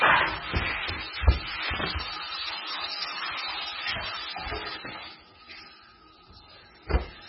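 A very low-bitrate encode, likely MP3 compression, runs through the whole sound recording. Nothing survives above 5.5 kHz, and heavy damage fits roughly 16 kbps. Weak frequency lines blink on and off between frames, so the sound turns watery and swirly and attacks smear.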